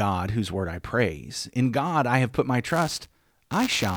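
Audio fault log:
2.67–3.96 s, buffer tearing: just after "I have put my", the speech takes on a robotic buzz at 200 Hz that lasts to the end of the clip and rides only on the sound itself. The writer and reader of the playback ring buffer have slipped so that they cross in every 5 ms period. A small sliver of each period, a few percent, carries audio from about 10 ms earlier, with hard joins at both edges.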